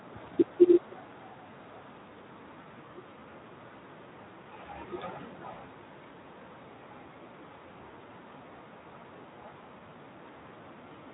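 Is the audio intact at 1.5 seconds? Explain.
Yes, at 1.5 seconds the speech runs intact, with no dropout, glitch or other fault at that moment.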